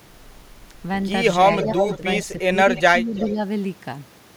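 From 1.59 to 1.97 s an echo leak puts back a delayed copy of the speech, about 335 ms late and only about 5 dB down, likely a loudspeaker echo the canceller missed. Fainter bits return at 2.76 and 3.15 to 3.33 s. Speech is suppressed in double talk with short dips of about 5 to 10 dB at 1.65, 1.98, 2.5, 2.88 to 3.15 and 3.32 s, likely the canceller ducking the talker along with the echo.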